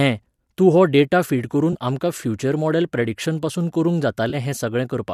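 AAC frame loss with concealment hits at 1.73 to 1.75 s and 4.30 to 4.35 s. About 20 and 30 ms of speech go missing. The decoder patches each gap from the last good spectrum, leaving a brief smeared, phasey blip. The gaps fit two and three lost frames of a low-delay AAC stream, likely AAC-ELD.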